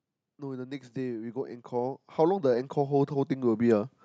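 Speech, with an automatic gain rising fault running from 0.38 s to 3.89 s. The gain control judged the input too quiet and kept raising its amplification, by about 15 dB in total, so the voice and the background noise swell together rather than the voice alone getting louder. On a waveform the envelope widens steadily across that span, and on a spectrogram the whole picture, including the noise floor between syllables, brightens gradually over time.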